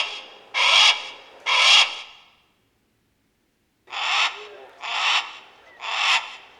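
Nothing stood out on listening to this recording of sounds.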